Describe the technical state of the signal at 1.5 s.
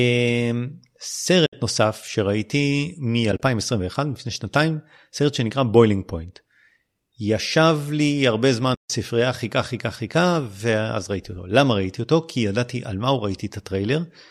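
At 1.5 s the speech drops out briefly from 1.46 to 1.53 s. This is AAC frame loss with muting. Several consecutive frames went missing, and the decoder replaced their spectrum with silence. About 70 ms of sound is gone, which fits a run of roughly seven lost frames. The overlapping windows ease the level down and back up, so the gap has soft edges. The light coloring around it is likely from low-delay AAC coding.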